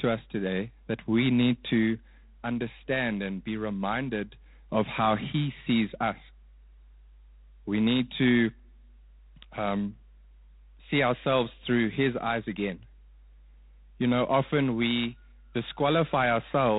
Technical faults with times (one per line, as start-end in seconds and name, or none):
0.00-16.78 mains hum
0.00-16.78 G.726 ADPCM